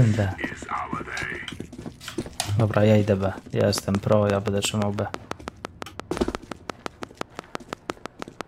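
From 3.61 s to 8.42 s a train of clicks runs over the sound: about thirty near-identical ticks at a regular 5.83 per second, peaking roughly 20 dB above the signal and audible in pauses too. Likely cause: repeated pulse interference from nearby equipment or a faulty connection or power supply.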